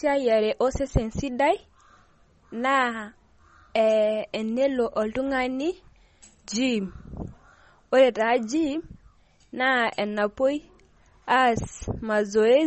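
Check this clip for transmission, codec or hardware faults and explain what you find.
One codec fault runs the whole way through. Throughout, the speech sounds watery and swirly with nothing above 8.3 kHz, likely MP3 compression starved of bits, which fits roughly 32 kbps, cutting treble and flickering weak frequency lines.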